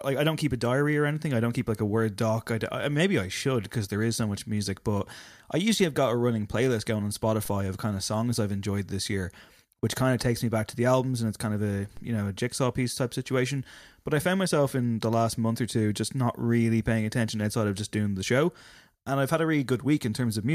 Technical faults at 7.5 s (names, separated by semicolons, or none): DC step